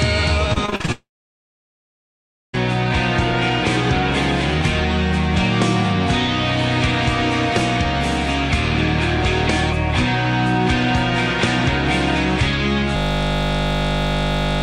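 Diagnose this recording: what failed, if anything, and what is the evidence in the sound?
Between 0.53 and 0.90 s the sound turns choppy, with six short holes. The longest is 39 ms, and about 40% of that stretch is filled by stretching the last sound. This is repeated packet loss (robotic sound) at the network stage. Packets kept arriving late or not at all. The receiver's concealment patched each gap by extending what it had just played, and the next gap came before the audio could recover.

Straight after, at 0.92 s, the audio smears into a brief fading continuation and then goes silent for about 1.5 s. It returns at 2.55 s with roughly 1.6 s of material simply gone. This points to a long network dropout, likely a complete interruption of the incoming stream. Concealment could only extend the last sound for a moment before giving up and leaving silence until packets resumed.

From 12.97 s to the very end, the audio becomes a steady, rigid buzz at 50 Hz. 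A single 20 ms fragment repeats exactly, 83 times over. That is a system hang loop at the driver or buffer stage. The computer or its audio driver stopped supplying new samples while the hardware kept replaying the same ring buffer. The loop length fits a buffer of about 20 ms, which is why the sound is a buzz rather than a slower stutter.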